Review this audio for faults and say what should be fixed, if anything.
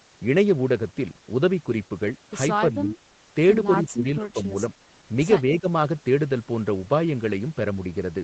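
Speech suppressed in double talk likely causes three dips in the speech: 2.71–2.9 s (about 5 dB), 3.91–4.43 s (about 20 dB) and 5.52–5.67 s (about 10 dB). Unlike packet loss, the level dips, with no clicks or robotic repeats. Tuning the echo canceller's double-talk detection so it attenuates only the echo would prevent this.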